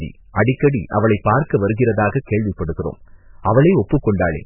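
MP3 compression damage runs through the whole of this speech clip, from start to finish, and the codec damage is heavy. Nothing is heard above about 2.9 kHz, so the treble is cut off. The lack of bits likely comes from a very low bitrate, on the order of 8 kbps. With so few bits, the encoder drops the weaker frequency lines, and they flicker in and out between frames, giving a watery, swirling texture.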